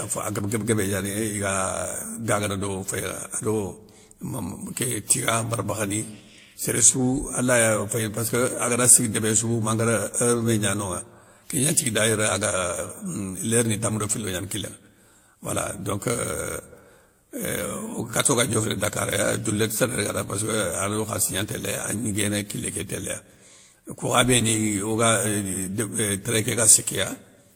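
Transcoding between lossy codecs is audible throughout the speech. Nothing is left above 17.2 kHz, and artefacts of different kinds overlap. This fits a likely WMA, Vorbis, then HE-AAC chain near 96, 51 and 48 kbit/s, each encoder spending bits on the previous one's damage.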